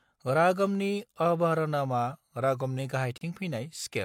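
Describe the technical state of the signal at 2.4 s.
At 2.4 s the speech sits inside a drift correction step running from 2.12 to 2.79 s, just after "रागमनि अवरहनमा". Playback slows by about 5.4% and pitch drops by about 97 cents, roughly a semitone. This is likely clock-matching software changing the rate in one step to manage its buffer. Unlike wow or flutter, the change is a single flat step with an abrupt onset rather than a wavering drift.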